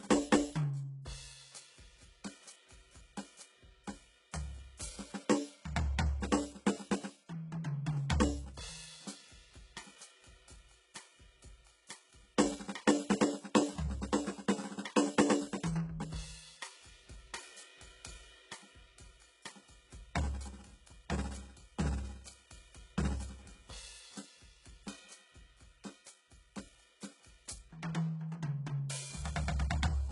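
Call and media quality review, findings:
HE-AAC compression, whole clip: upper band present up to a hard ceiling at 11.1 kHz but synthetic. Cymbals gritty and metallic, harmonics misaligned above the crossover. Heavy damage, fitting a very low bitrate. Likely codec. Replicated treble rather than plain dullness separates it from a simple low-pass.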